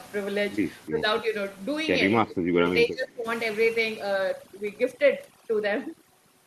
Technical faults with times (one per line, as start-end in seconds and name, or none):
0.89-1.03 speech suppressed in double talk
2.25-3.26 speech suppressed in double talk
3.49-6.46 overdone noise removal